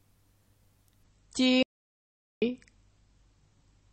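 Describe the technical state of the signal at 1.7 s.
At 1.7 s the output is silent: the sound breaks off mid-flow at 1.63 s and stays dead for about 0.79 s until 2.42 s, then carries on. This is a playback stall, likely from the player's buffer running dry or its thread being blocked.

Around that gap, from 1.03 s onward, the sound turns smeared with codec artefacts. This is an adaptive stream at a lower bitrate. The player swapped to a lower-quality rendition after the connection slowed, which fits a step down from 128 to 32 kbit/s MP3.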